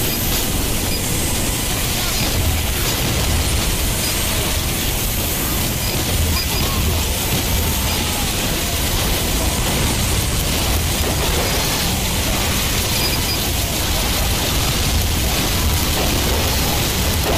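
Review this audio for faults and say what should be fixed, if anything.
USB whine runs throughout: a fixed 1 kHz tone with its strongest component at 8 kHz, roughly 20 dB below the sound, from USB frame current leaking into power or ground. On a spectrogram it shows as steady horizontal lines across the whole clip. Power the interface separately or add ground isolation.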